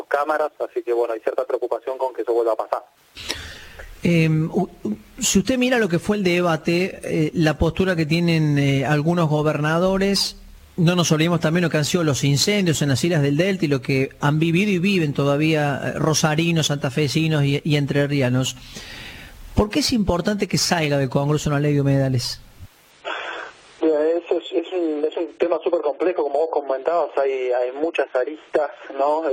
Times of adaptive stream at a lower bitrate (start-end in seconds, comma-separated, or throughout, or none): 22.91-29.32